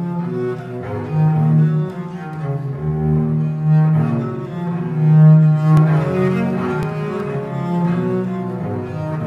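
A small jump in the sound occurs at 5.77 s, and again at 6.83 s, with a few milliseconds skipped each time. This is likely a dropped buffer (overrun), where samples were overwritten before being read and the surrounding audio spliced together.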